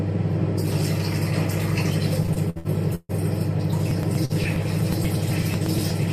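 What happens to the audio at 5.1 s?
At 5.1 s the sound is inside a run of periodic USB or driver dropouts that starts at 3.91 s and lasts to the end. Every 0.121 s, about eight times a second, something blocks the audio path and a sliver of signal is skipped, heard as a tick. Unlike random packet-loss glitches, these ticks are evenly spaced like a metronome, and they appear only where there is sound.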